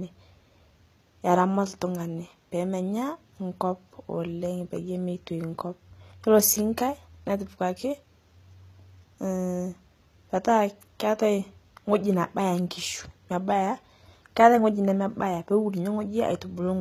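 HE-AAC compression runs throughout the speech, likely at a bitrate as low as 20 kbps: the treble is rebuilt from copied lower bands and stops near 14.9 kHz, so s sounds turn gritty and lispy.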